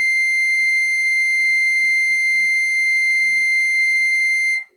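No technical faults are audible anywhere in the music, so there is nothing to flag.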